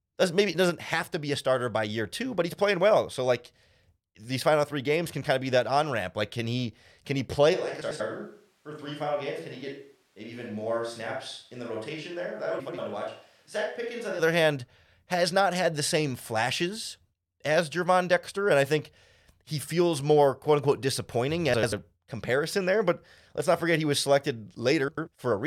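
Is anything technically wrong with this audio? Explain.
Yes. There are two kinds of fault: a change of microphone perspective, and four short stretches played out of order.

Between 7.55 and 14.18 s the speech turns roomy and hollow, drops by about 5 dB and sits over room noise about 35 dB below it. This is likely a switch to a distant microphone, where the close signal was lost and a farther pickup took over. Both transitions are abrupt. On a waveform the envelope steps down and back up. On a spectrogram the gaps between syllables fill with a steady noise floor and the reverberant tails smear along the time axis.

Frames out of order occur at 7.81–8.01, 12.59–12.79, 21.54–21.73 and 24.88–25.08 s. Each time, two adjacent runs of about 93 ms were decoded in swapped order, consistent with four codec frames per run. The result is a garbled flutter lasting about 0.19 s, with no time lost. A spectrogram shows sudden vertical seams where formant tracks jump at the joins between the exchanged halves.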